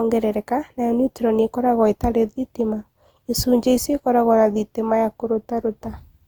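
From start to finish the speech has a swirly, smeared, hollow quality, with blurred consonant onsets and more warbling than a single moderate-bitrate pass would leave. This is likely generation loss, the audio having gone through something like an Opus encoder around four times at a rate near 48 kbit/s, each re-encode landing on a new frame grid and adding fresh quantisation damage. A spectrogram would show nothing above 20.3 kHz, while the waveform's transients look softened.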